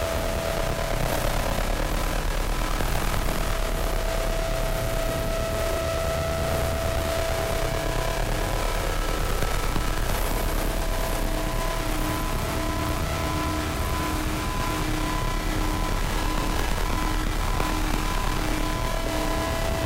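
A recording of everyday sound with one brief fault near 16.42 s. There, chunks play out of order. A chunk about 5.3 ms long arrives one chunk late and plays after the chunk that should follow it. Nothing goes missing, but the order is wrong. This creates three hard joins in quick succession. The result is a tiny jumbled blip.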